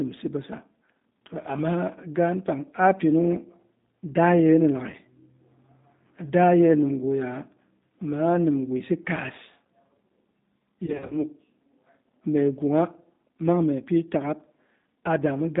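The speech passes through G.729 coding at 8 kbit/s throughout. Only about 150 Hz to 3.7 kHz survives. The model-based rebuild sounds plainly rough and synthetic. VoIP packet loss, concealed by the speech codec, follows "daa yena" at 4.90 to 4.96 s. About 30 ms is stretched into a brief buzzy tone or coloured noise that fades. From 10.86 to 11.16 s, 130 ms goes missing in runs up to 40 ms, leaving weak, distorted sound.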